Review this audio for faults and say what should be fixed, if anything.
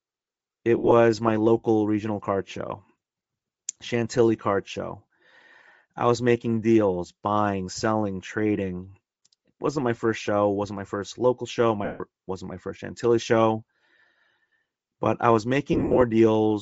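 Bluetooth LC3 compression is plainly audible throughout. The speech has a breathy, grainy edge where the upper spectrum has been thinned and filled with noise. This fits a 32 kbps setting with 7.5 ms frames and is likely the cause. Prevent it by raising the LC3 bitrate or by capturing before the Bluetooth link.

Lost LE Audio frames occur at 0.78–0.92 s, 11.85–12.0 s and 15.73–16.03 s. The first loss totals 90 ms scattered over 135 ms, with a longest run of about 50 ms. The second is 150 ms. The third totals 157.5 ms scattered over 285 ms, with a longest run of about 40 ms. The decoder repeats the last spectrum with random signs and fades it after a few frames. Prevent it by improving link quality or distance, or by recording over a wired path.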